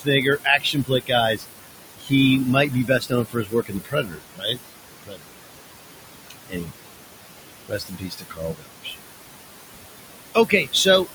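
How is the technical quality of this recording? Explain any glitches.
The recording has two related noise-suppression faults running through it, set against room noise sitting about 10 dB below the speech.

Noise suppressor artifacts run from start to finish. The suppressor pulls down every band it judges to be steady noise, by about 20 dB. The room noise drops away between phrases and swells back under them.

Speech cut by the noise suppressor occurs at 0.0–1.12 s, 1.35–1.45 s, 1.99–2.12 s, 2.69–4.6 s, 5.03–5.37 s, 6.48–6.83 s, 7.68–8.96 s and 10.35–10.86 s. Mistaking quiet speech for noise, the suppressor turns it down by about 14 to 22 dB. Soft consonants and endings sound swallowed, for up to around a second within the longest stretches.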